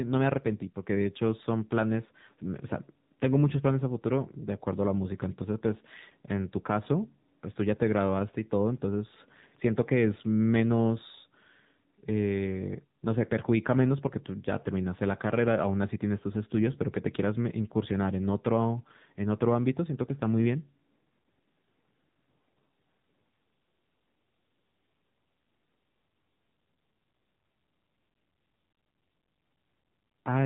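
Speech runs through the AMR narrowband mobile codec across the whole clip, with the damage plainly audible. Nothing reaches above 4 kHz, and the voice has the buzzy, synthetic edge of a low-rate vocal-tract model rebuilt from sparse pulses, which fits the 7.4 kbps mode. A simple telephone-band filter would muffle the voice but leave it natural. Here the timbre itself is resynthesised, and that marks a codec rather than plain band-limiting.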